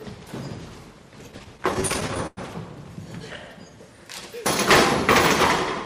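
Between 1.31 and 2.39 s the audio shows repeated stalls (stutter): fourteen times the jitter buffer ran dry and the last sound was held, up to 102 ms at once. These appear as smeared, frozen spectrogram columns. From 3.51 to 3.77 s a jitter buffer slow-down repeats pitch periods, adding 37 ms and playing at 88% speed. The waveform shows near-identical cycles copied in a row, with unchanged pitch.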